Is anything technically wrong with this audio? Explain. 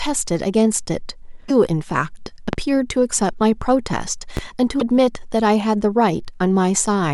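Yes. There are two kinds of fault in this speech clip.

Damaged data in a compressed stream occurs at 1.48 to 1.51 s and again at 4.77 to 4.82 s. Bytes in the encoded stream were corrupted, so the decoder misreads those frames, loses its place and has to hunt for the next valid frame header. What comes out during each stretch is a brief chirp, squawk, click or short hole in place of the speech.

Two loud pops sit at 2.53 to 2.57 s and 4.37 to 4.41 s. Each was likely caused by a sudden voltage step or pulse, from a plug, switch, static discharge or driver glitch, being added to the signal path. It sounds like a single sharp pop or thump layered over the speech, which continues beneath it. The first peaks about 15 dB above the speech, and the second about 10 dB above it.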